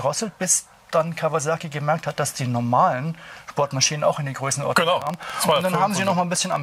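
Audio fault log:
5.02 to 6.57 s, train of clicks: a burst of sharp, similar-sounding pops ticks over the sound at roughly 13.6 per second, uneven in spacing, about twenty clicks in all, standing out around 10 dB above the underlying level. Because each pulse has much the same shape and they keep arriving through the stretch, the ear hears a stuttering rattle rather than isolated defects. This points to likely electrical interference or a faulty connection or power supply injecting repeated pulses.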